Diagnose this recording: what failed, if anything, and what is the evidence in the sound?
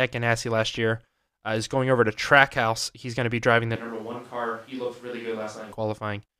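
After "to be driving the", 3.76 to 5.72 s, speech goes hollow and roomy, about 10 dB quieter. Analogue capture: likely a switch to a distant microphone.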